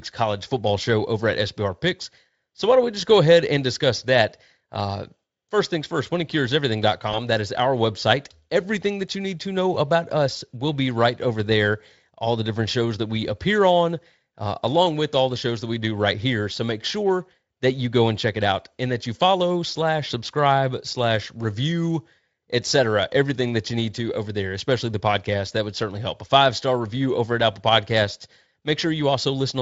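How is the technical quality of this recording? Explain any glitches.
One glitch stands out in this speech, heard through light Speex coding. From 7.11 to 7.17 s there's VoIP packet loss concealed by the speech codec. One 20 ms frame went missing. The decoder extended its previous pitch and filter, producing a brief buzzy or noisy smear that briefly lingers.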